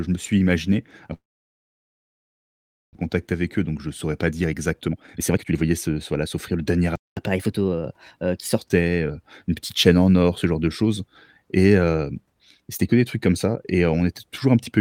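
After "je me suis imaginé", the speech cuts out from 1.13 to 2.97 s. A fading buzz gives way to near-silence. This is likely a long network dropout, and about one second of speech is lost.

From 4.31 to 6.57 s, between "je saurais pas" and "le dernier", a jitter buffer speed-up runs the speech at 133% with unchanged pitch. It sounds hurried, trimming roughly 0.7 s.

At 6.96 s the sound halts abruptly for 212 ms, then resumes. This is likely a playback stall.

From 7.17 to 8.58 s, after "le dernier" and up to "heu une petite chaîne", catch-up at higher speed plays at 1.15 times speed. Pitch rises about two semitones.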